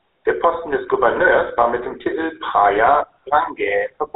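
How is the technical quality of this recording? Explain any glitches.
Quality is limited by one fault heard throughout this speech clip: GSM full-rate codec damage. From start to finish the speech is squeezed into a narrow band with nothing above 4 kHz. The excitation is rebuilt from sparse, regular pulses, which sounds like a plainly audible buzzy, gravelly roughness, consistent with a 13 kbps GSM stream.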